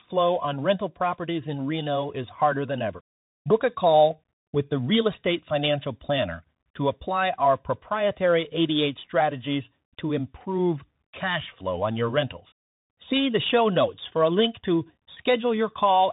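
Throughout the speech, the Bluetooth CVSD headset codec is plainly audible: a hard ceiling near 3.8 kHz, scratchy s sounds, and a grainy hiss riding under the voice. That grain, from one-bit up-down steps at a rate fitting 64 kbps, separates it from a clean telephone-band filter.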